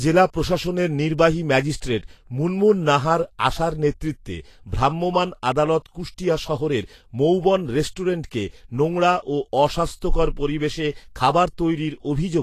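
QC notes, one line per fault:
Throughout, Vorbis compression: the speech is hissy and grainy, with roughened tone and blurred attacks, likely from low-rate Vorbis coding at a bitrate near 35 kbps. The treble is quantised so coarsely that fine detail becomes noise of similar energy.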